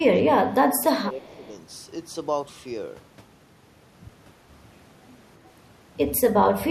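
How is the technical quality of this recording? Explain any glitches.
The recording has two glitches in its opening second and a half, one tied to the talker overlapping someone else on the line.

From 0.0 to 1.52 s the speech dips by roughly 15 dB in patches totalling about a second: speech suppressed in double talk, likely an echo canceller ducking everything while both sides spoke.

From 1.22 to 1.48 s a faint copy of the speech trails 329 ms behind, far below the direct sound: an echo leak, likely the far end's canceller letting loudspeaker pickup return.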